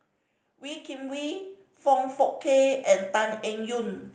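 From 0.43 s to 4.06 s there is automatic gain rising. The gain control judged the input too quiet and kept lifting it, by about 13 dB overall. Speech and background swell together, slowly and steadily, through the call codec's band-limited sound.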